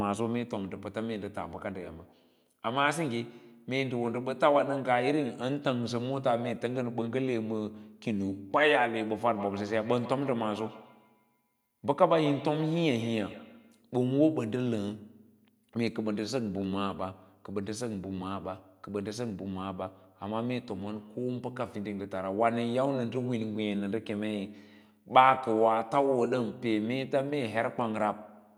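From 9.18 to 13.82 s the speech carries feedback echo between two devices. A second device in the same room replays this audio and its sound reaches the microphone again, where the echo canceller cannot remove it. Each word returns at a steady interval of roughly 150 ms, peaking at about 14 dB below the speech. Room reverberation smears into a continuous tail instead, whereas these returns are distinct, evenly spaced repeats.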